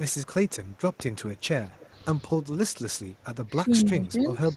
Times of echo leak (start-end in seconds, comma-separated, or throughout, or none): 0.47-0.96, 1.73-1.87, 3.81-4.05